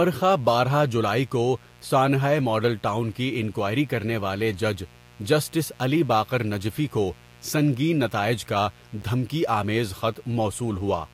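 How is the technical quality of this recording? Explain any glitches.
Technically it's let down by two problems: a constant buzz under the speech and one brief dropout near the end.

Mains buzz runs the whole way through, a raspy 60 Hz buzz with harmonics climbing into the kilohertz range, sitting roughly 30 dB below the speech. Sharp switching spikes leaked in twice per mains cycle.

At about 9.02 s there's a block of digital silence lasting 10 ms. The samples dropped straight to zero and back with no fade, so it comes across as a quick tick.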